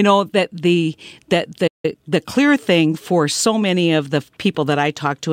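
At 1.67 s, right after "know that the that", the speech goes silent for 164 ms in a playback stall. The likely cause is the player running dry or its thread being blocked.

From 1.85 to 2.17 s, up to "clear thing for so", time-compressed catch-up follows. The player trims its backlog by splicing out small slices and cross-fading the joins, so the speech runs at 1.5 times its normal rate. A plain speed-up would raise the pitch, but here the pitch stays normal.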